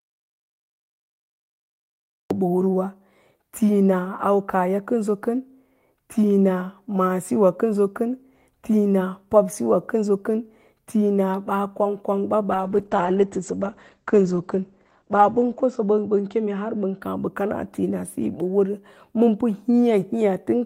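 A speech clip carried over a call, with two separate faults. It opens in an audio dropout to silence that is already under way at the start and lasts until 2.31 s. The gap is silent with no room tone or hiss. That sets it apart from a quiet pause or from packet-loss concealment, which would fill a gap with smeared or buzzy guesses. The likely cause is the input being lost, through a disconnected device, a broken link or a mute, while recording carried on writing silence. From 12.52 s to 17.07 s there is a call bitrate drop. The Opus encoder falls from 32 kbps to about 11 kbps and stays at its lowest for roughly 3.2 s. The audio band shrinks to about 8 kHz, so the speech turns muffled and rough, with a watery coding texture. What separates this from a simply dull codec setting is its time course. The degradation arrives partway through and then clears as the bitrate climbs back.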